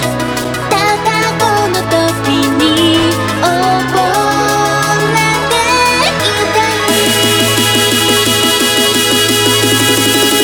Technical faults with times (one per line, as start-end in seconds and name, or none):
0.42-0.49 loose connector crackle
2.98-3.04 loose connector crackle